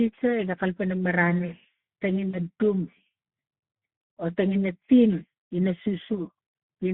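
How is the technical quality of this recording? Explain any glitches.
Technical quality is poor. This is narrowband speech with plainly audible codec damage all the way through, plus one short dropout.

The Speex codec shapes the whole clip. The audio sits in a telephone band of roughly 150 Hz to 3.4 kHz, so it sounds thin and boxy. The hoarse, grainy texture points to a low-rate setting, something around 11 kbps, which leaves the CELP encoder too few bits to model the excitation properly. That is why the voice comes across as rough and noisy.

The VoIP packet loss concealed by the speech codec shows up right after "marani tenge," from about 2.29 to 2.37 s. Around 40 ms of audio went missing, which fits two lost 20 ms frames. The decoder filled the gap by repeating its last pitch and filter settings while ramping the gain down. You hear a brief smeared stretch, a buzzy tone or coloured noise, that fades, and the voice stays a bit weak or distorted for a moment after the audio returns.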